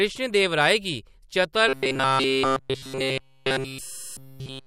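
Robotic sound from repeated short buffers runs from 1.69 s, right after "गी चतर", to the end: likely a roughly 7.5 ms buffer looped, imposing a rigid 133 Hz metallic buzz throughout.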